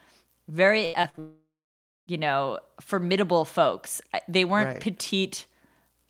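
Repeated packet loss (robotic sound) runs from 0.85 to 1.19 s. Four short holes open in quick succession, the longest about 79 ms. Each is patched by stretching the sound just before it, so nearly half of this third of a second is filler. About 160 ms of real audio never arrives, and the stretch comes out choppy, with pieces clipped away.

A long network dropout follows at once, from 1.19 to 2.09 s. The last sound is drawn out as a fading buzz, then about 0.58 s of silence remains before the audio resumes at "you know formidable folks". Close to 0.9 s of the original is simply gone, not delayed. The likely cause is the stream stalling entirely, so the receiver had nothing to play and fell back on concealment until fresh audio arrived.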